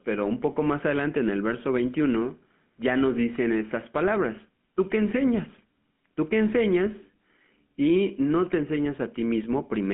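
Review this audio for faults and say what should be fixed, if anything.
The whole clip carries GSM full-rate codec damage, and it is plainly audible. The speech sounds buzzy and gravelly. The codec rebuilds the voice from a coarse pulse excitation. Nothing remains above 3.8 kHz, and the line band runs from 150 Hz to 3.5 kHz. This fits a 13 kbps full-rate link. To prevent it, record locally or use a wideband codec instead of a GSM path.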